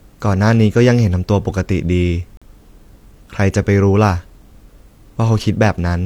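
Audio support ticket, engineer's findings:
Gap between stream segments at 2.37 to 2.42 s in the speech. Hard-edged hole, sound drops to dead silence for roughly 45 ms, then picks up cleanly. Probably the player's segment joining: two adjacent segments' timestamps don't meet, so it pads about 44 ms with silence. Nothing lost, just that much time added. Lines up with a segment boundary, with segments about 4 s long. Worth checking the packager's timestamp math.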